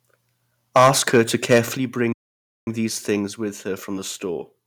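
From 0.76 to 1.59 s the speech is harsh and crackly on its loudest syllables. This is microphone overload. The peaks run about 10 dB past what the converter can hold, so their tops are sliced flat. A few percent of the samples in that stretch are clipped. The flattening adds a gritty, buzzing edge. The likely cause is a microphone input volume set too high for this talker.

At 0.77 s, just as the distortion begins, the level dips by about 2 dB. At 1.77 s it drops again, this time by about 6 dB. Both are a microphone volume stepped down. Voice and background fall together in a single step, with no fade. The likely cause is the call software reacting to the clipping by cutting the device's input volume. The first cut is too small to stop the crackle. The second comes just after it ends.

From 2.13 to 2.67 s the sound stops dead in mid-flow. This is a playback stall lasting about 543 ms. The output goes fully silent, then picks up again. 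The gap is abrupt at both ends, unlike a natural pause. The likely cause is the player running short of audio data, or its thread being blocked, until it recovered.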